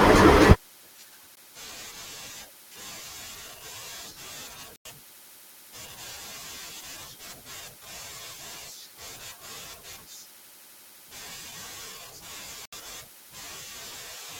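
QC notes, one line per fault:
1.35 s, 4.76–4.85 s, 12.66–12.73 s: block of digital silence. Audio drops to silence with no fade for about 16, 93 and 70 ms. The longest fits a 4096-sample buffer left unfilled. Flat waveform line, blank spectrogram column edged by vertical broadband streaks.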